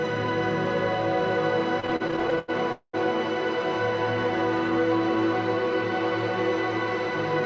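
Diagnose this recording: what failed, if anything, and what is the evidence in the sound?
Between 1.80 and 2.50 s the audio stutters and drags: it keeps catching on itself, with thirteen short holds where the last sound is stretched out, the longest about 91 ms, adding up to roughly 262 ms, over a third of that stretch. Nothing is lost, only delayed. This is repeated stalls (stutter) at the network and jitter-buffer stage. Packets were arriving more slowly than playback consumed them, so the buffer kept running dry and the receiver padded each wait by continuing the previous sound.

At 2.72 s the sound hangs for about 213 ms. The last sound carries on as a decaying buzz or hiss and sinks into roughly 90 ms of silence before the audio resumes at 2.95 s, picking up where it stopped with nothing skipped. This is a call audio freeze, likely caused by a single longer packet hold-up on the network. 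The jitter buffer emptied and concealed the gap, shifting everything after it about 213 ms later. Through both events the G.722 band limit is audible, with nothing above 8 kHz.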